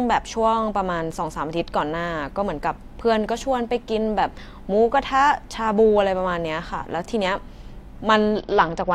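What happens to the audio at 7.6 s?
At 7.6 s the speech carries on intact, with no dropout, glitch or distortion at that point.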